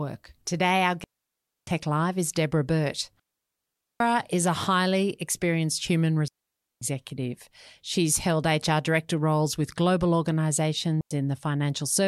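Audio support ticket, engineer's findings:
Digital wireless dropout, four instances: 1.04–1.67 s, 3.20–4.00 s before "is a highly experienced", 6.28–6.82 s after "a highly experienced human", 11.01–11.11 s. Clean near-silent holes, no noise bursts. Receiver muting on lost RF data; mutes 0.1–0.8 s.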